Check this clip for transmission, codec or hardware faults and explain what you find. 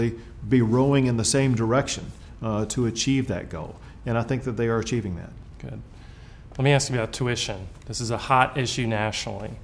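No transmission, codec or hardware faults turn up in this clip.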